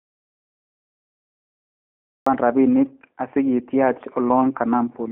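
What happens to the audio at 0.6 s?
At 0.6 s you're sitting inside an audio dropout to silence. It's already under way when the clip starts and doesn't let go until about 2.26 s. This isn't quiet room tone. It's plain silence, no hiss, nothing. The likely cause is that the input got cut off, say a device dropping out or a link failing, while the recorder kept writing empty samples. Whatever was being said during that stretch is simply gone.

There's also a G.729 codec, the G.729A flavour at 8 kbit/s, running across the whole clip, though at 0.6 s it has nothing to work on. Once the speech comes back after 2.26 s you'll hear it. The band is squeezed to roughly 250 Hz to 3.4 kHz, with nothing above 3.6 kHz. The codec rebuilds each 10 ms frame from a vocal tract model, a pitch predictor and a few pulses, so the speech comes out plainly rough and synthetic-sounding.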